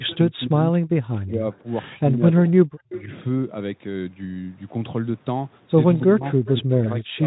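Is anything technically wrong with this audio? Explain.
Yes. Several call-path faults are audible in this speech clip.

Speech suppressed in double talk, 0.0 to 3.1 s and 6.04 to 7.26 s: the voice dips by about 25 dB or breaks up. The likely cause is an echo canceller ducking both sides during overlap. The waveform shows gouged, uneven envelopes.

Echo leak, 0.1 to 0.58 s, 1.53 to 1.58 s, 2.47 to 3.03 s and 5.97 to 6.55 s: a faint copy trails about 270 ms behind, at about −15 to −40 dB. This is likely residual loudspeaker echo sent back, and the spectrogram shows ghost harmonics shifted right.

VoIP packet loss concealed by the speech codec, 1.81 s: one 20 ms frame was extrapolated from the previous pitch, giving a brief stretched, fading smear that appears as a smooth, blurred spectral patch.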